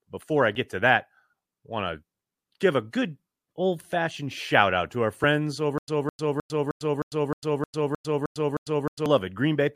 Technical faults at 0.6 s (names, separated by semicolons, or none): dropped buffer (overrun)